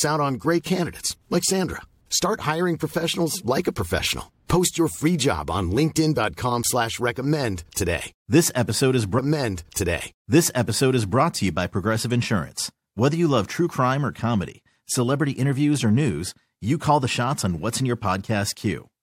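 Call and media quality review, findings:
Stream segment repeated, 9.17–11.17 s. About 2.0 s of speech replays after a small blip at the jump back. Player fetched or queued the same segment twice; delivery/playback buffer layer, not the source recording. Adds roughly 2 s to playback.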